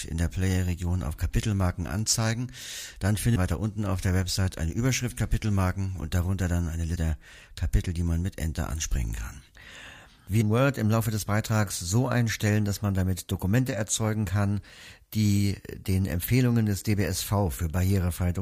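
Damaged data in a compressed stream hits the speech at 3.35 s, 6.95 to 6.97 s, and 10.40 s. Corrupt frames desync the decoder. Each is brief.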